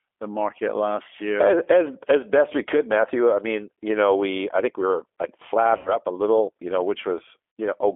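A speech clip sent through the G.729 codec at what sounds like about 8 kbit/s, which rebuilds the voice from a filter, pitch predictor and a few pulses per frame. The result is confined to roughly 300 Hz to 3.4 kHz and carries a plainly audible rough, synthetic edge. Packets were also lost and covered by the decoder's VoIP packet loss concealment, which stretched the last pitch and filter while fading the gain. From 5.77 to 5.98 s an 80 ms gap is stretched out and fades, and at 7.56 s a 60 ms gap does the same, with the voice weak briefly afterward.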